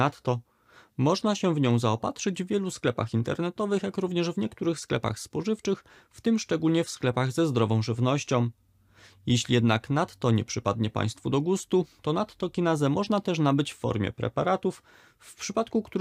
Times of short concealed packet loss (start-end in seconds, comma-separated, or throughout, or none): none